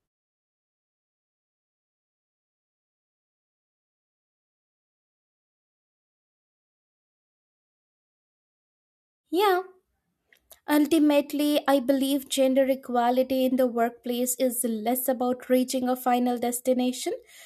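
No technical faults can be heard in this recording.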